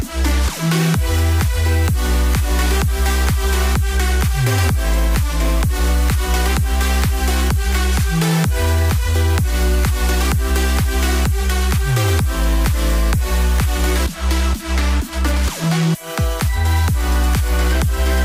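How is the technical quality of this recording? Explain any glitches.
There is one glitch, a short burst of DAB burbling. It runs from 15.63 to 15.72 s, lasting under a tenth of a second. Weak reception let bit errors slip past the error correction into the MP2 audio data, at a low rate of around a tenth of a percent. Corrupted samples put short blips of noise in single sub-bands, and corrupted scale factors make sub-bands jump in level. The length points to a handful of damaged frames. It sounds like a few brief watery blips over the audio.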